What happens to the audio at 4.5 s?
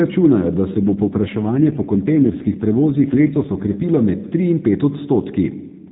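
Nothing goes wrong at 4.5 s: the speech continues intact through that moment, carried by the same AMR narrowband mobile codec as the rest of the clip, which caps the audio at 4 kHz.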